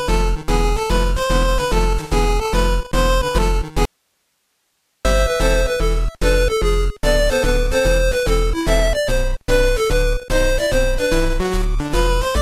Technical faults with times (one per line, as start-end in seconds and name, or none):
3.85-5.05 audio dropout to a faint residue